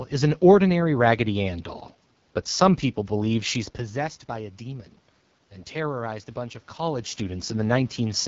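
From start to finish the speech carries the sound of the AMR wideband (HD Voice) codec running at one of its lowest modes, which fits a rate near 8.85 kbit/s. The pulse-driven vocal tract model is short of bits, so the voice turns rough and raspy. The level shifts near 3.5 and 6.5 s are the talker moving. Content stops at about 7.6 kHz, well above narrowband AMR's 3.4 kHz ceiling, yet the texture is plainly damaged.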